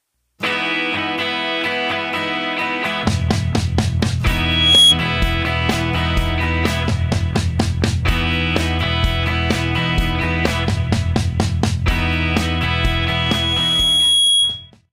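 At 4.28 s a loudspeaker feedback squeal rises to a 3.3 kHz tone over about half a second and stands well above the sound until 4.99 s. The microphone is picking up its own loudspeaker, and loop gain exceeds one. It returns at 12.41 s, swelling more slowly over about two seconds and staying somewhat quieter, until 14.71 s.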